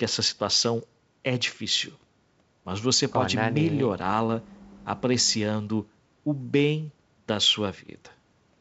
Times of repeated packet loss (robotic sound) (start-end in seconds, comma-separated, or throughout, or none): none